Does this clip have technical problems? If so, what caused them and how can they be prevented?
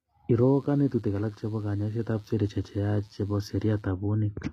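Yes. The speech's treble sounds gritty and metallic throughout, and nothing reaches above 14.9 kHz. The likely cause is HE-AAC compression at a low rate, around 20 kbps. It keeps only the lower spectrum and rebuilds the treble from copied bands. Encode at a higher bitrate.

From 0.31 s to 3.88 s, a steady, raspy mains buzz sits roughly 35 dB below the speech. Its base is 60 Hz. Sharp switching spikes, twice per cycle, add harmonics into the kilohertz range. Use shielded cables and keep dimmers off the audio circuit.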